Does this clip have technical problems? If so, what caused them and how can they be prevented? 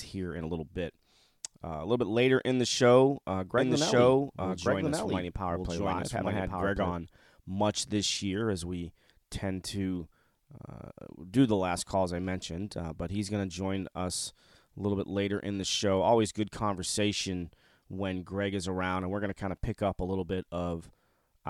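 Yes. From 3.58 to 6.92 s there is a doubled audio track. The likely cause is the signal being captured a second time through a slower path, or an edit leaving two copies out of step. The result is a full-band duplicate about as loud as the original, trailing it by roughly a second, with no decay or room colour, and it starts and stops abruptly. To prevent it, route each source through a single capture path and check edits for overlapping copies before export.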